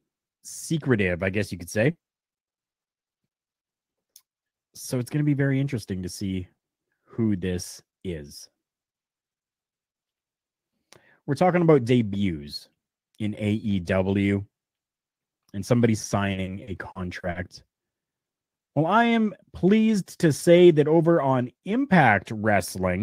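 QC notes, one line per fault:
1.91 s, short concealed packet loss: roughly 40 ms of audio, just after "guess you could say", arrived too late for the decoder, so the receiver stretched the preceding sound to cover the gap and blended back in, leaving a brief smear.
2.43–3.06 s, repeated packet loss (robotic sound): the stream kept dropping audio here, in four holes of up to 40 ms, about a quarter of the span. Each patch repeats the last sound before the next hole arrives, giving a choppy stutter.
3.91 s, 4.11 s, 4.47 s, short concealed packet loss: three separate losses of about 40 ms each, each covered by continuing the previous sound and fading back. Each is heard as a quick smear or wobble, and a short consonant may be swallowed.
16.31–17.38 s, repeated packet loss (robotic sound): right after "and somebody", the stream dropped audio six times in about a second, each gap up to 40 ms and about 22% of the stretch in total. 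Back-to-back concealment makes the sound choppy, with pieces missing.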